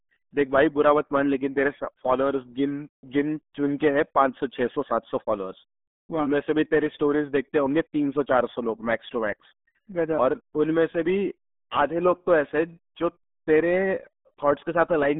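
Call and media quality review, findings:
RealAudio 14.4 codec artefacts, throughout. Speech muffled and gargly, heavily degraded. Band limited to roughly 200 Hz to 3.6 kHz; nothing above 3.8 kHz. Component: legacy dial-up-era speech encoder. Mechanism: very coarse parametric coding discards high frequencies and fine spectral detail, consistent with an 8 kbit/s stream. Not recoverable downstream; re-source from an uncoded original.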